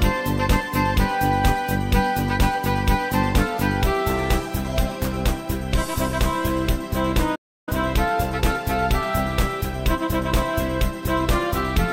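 At 7.35 s the sound cuts off in mid-flow and stays silent for roughly 0.32 s before picking up again at about 7.69 s. This is a playback stall, most likely from the player running short of buffered data or having its output thread blocked, so nothing reached the output until it recovered. On a waveform it appears as a flat line at zero between those times; a spectrogram shows a clean vertical band of empty space across all frequencies.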